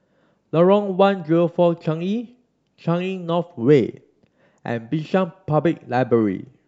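DAB burbling appears at 6.17 to 6.39 s near the end of this speech clip: weak reception lets bit errors through, putting short blips of noise into single sub-bands.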